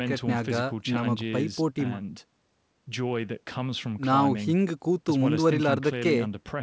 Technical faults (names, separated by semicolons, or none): none